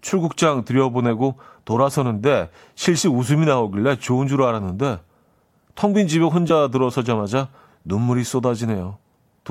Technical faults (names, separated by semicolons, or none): damaged data in a compressed stream